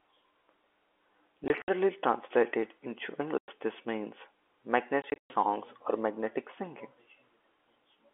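Packet loss filled with silence chops the speech at 1.48–1.68 s, 3.38–3.48 s and 5.02–5.30 s, where the longest run lasts 120 ms. The gaps fit 20 ms packets. The waveform drops to silence with hard edges, showing as blank vertical strips on the spectrogram.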